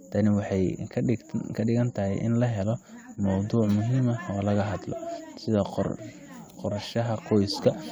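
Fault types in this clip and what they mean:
No faults detected; the speech signal shows no audible defects.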